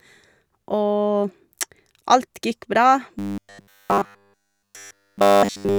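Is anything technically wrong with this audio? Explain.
Yes, there's a robotic sound from repeated short buffers starting at about 3.19 s and running to the end of the clip. The likely cause is new audio arriving too slowly, so the playback side keeps looping the last 10 ms chunk while the real signal gets skipped. Essentially all of that stretch is repeats, which stamps a fixed 100 Hz buzz onto the speech. It comes across as a stiff, metallic drone that only loosely tracks the talking.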